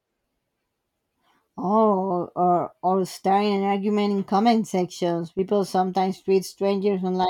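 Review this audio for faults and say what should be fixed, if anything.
From 5.28 to 5.39 s the speech falls abruptly by about 6 dB, then returns. This is likely one channel dropping out, halving the shared signal in the mono sum. A full dropout would go silent and a gain dip would ramp, but this is a clean half-level step. Secure stereo connectors and watch both channel meters while recording.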